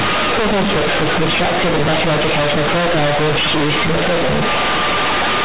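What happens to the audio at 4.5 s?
At 4.5 s, as throughout the clip, the speech shows companded audio read as linear: A-law G.711 bytes are played back as plain linear 8-bit samples with no expansion. Every sign change jumps across half the output range, so quiet and loud parts come out equally large, heard as harsh, very loud buzzing distortion with heavy noise in the pauses.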